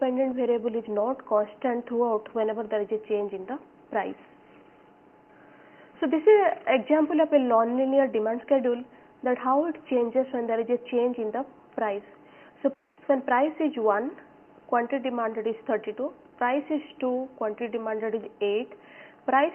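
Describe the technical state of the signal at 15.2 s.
At 15.2 s the signal is intact, with no audible technical fault at that moment.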